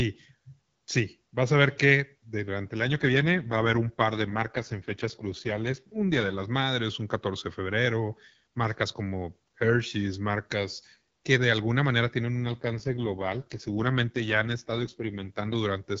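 Speech over AMR-WB with two AMR rate drops, at 2.78 to 6.46 s and 12.36 to 15.56 s, likely from a weak radio link. The sound roughens consistent with 12.65 falling to 6.6 kbit/s, turning raspy and synthetic without gaps or band loss, then clearing.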